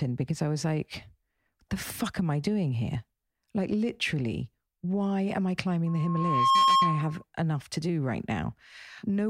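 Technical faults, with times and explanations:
5.86–7.24 s, loudspeaker feedback squeal: mic-to-speaker loop gain exceeds one at 1.1 kHz, so a tone swells within about 0.7 s to about 10 dB over the speech, showing as a bright horizontal spectrogram line.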